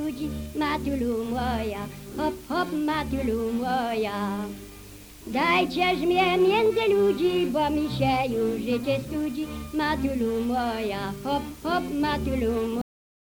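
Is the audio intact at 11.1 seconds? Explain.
Yes, the audio at 11.1 seconds is intact, with no dropout, click, distortion or other fault at that moment.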